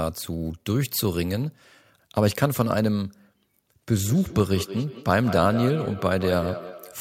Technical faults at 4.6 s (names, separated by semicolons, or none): feedback echo between two devices